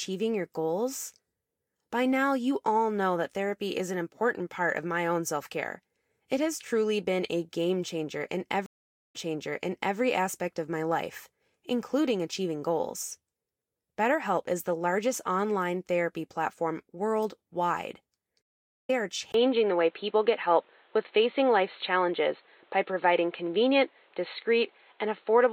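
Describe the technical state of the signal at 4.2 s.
At 4.2 s the speech signal is intact, with no audible fault at that moment.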